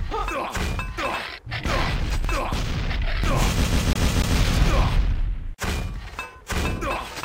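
From 3.64 to 4.37 s the sound gets CD stuck on one turn: a 145 ms slice repeats five times with brief mutes, the laser jumping back at a scratch.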